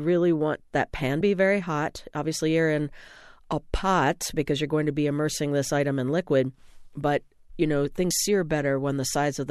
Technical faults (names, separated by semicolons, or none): compressed frames skipped